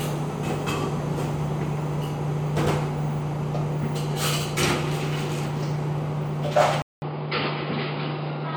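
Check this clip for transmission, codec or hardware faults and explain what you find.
One fault is present: an input switched to a poorer device, from 6.82 s to the end of the clip. At the switch the sound drops out for about 200 ms, then returns with nothing above 5 kHz and a new background noise roughly 30 dB below the sound. Loudness stays about the same. The likely cause is the system changing its input mid-recording to a narrower-band microphone or headset path, which brings its own tone and noise, so the last stretch sounds duller and boxier.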